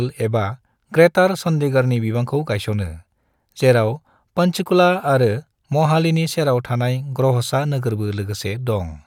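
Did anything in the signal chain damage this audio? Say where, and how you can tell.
No, nothing in the signal chain stood out as damaging this speech on listening.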